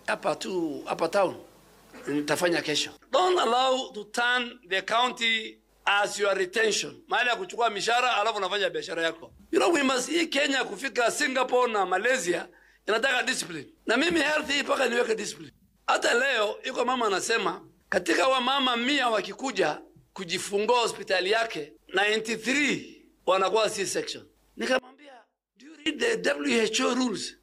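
From 24.79 to 25.86 s the sound suddenly drops by about 26 dB, leaving just a faint residue. That's likely one channel inverted: with one side's polarity flipped, everything common to both sides cancels when they're summed, and only the difference survives.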